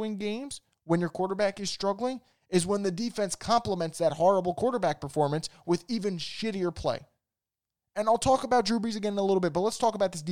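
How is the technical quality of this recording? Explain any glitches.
No technical faults are audible.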